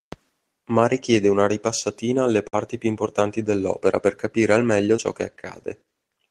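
At 2.47 s a burst of packet loss strikes: a run of packets failed to arrive in time, and about 60 ms of audio went missing. The receiver fills a gap of roughly 54 ms by stretching the last sound it had and fading it down, so the speech briefly turns into a held, dimming continuation. It then jumps back in at 2.55 s with that stretch of the original simply gone.

At 4.97 s comes a short concealed packet loss, ending by 5.00 s. About 20 ms of the call never reached the decoder, and the receiver patched a gap of roughly 10 ms by extending the preceding sound before blending into the real audio again. The result is a quick smear or wobble in the speech rather than an audible dropout, and a brief sound at that spot can slip away entirely.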